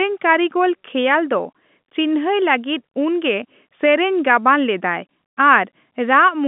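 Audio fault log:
No faults logged; the speech sits within the G.711 telephone coding band of 150 Hz to 3.6 kHz, with nothing above 3.8 kHz.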